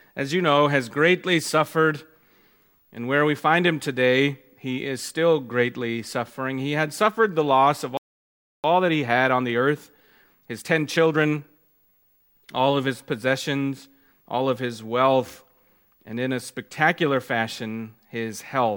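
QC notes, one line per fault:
7.97 to 8.64 s, playback stall: the sound cuts out mid-flow for about 0.67 s of silence, then resumes where it left off. Likely the player's buffer ran dry or its thread was blocked. Unlike a dropout or gap edit, nothing is lost, it simply waits.
8.64 to 11.64 s, time-compressed catch-up: for three seconds after the stall the audio runs hurried, about 1.15 times normal speed, at unchanged pitch, as small pieces are cut out and cross-faded to clear the backlog. Tape-style speed-up would raise the pitch instead.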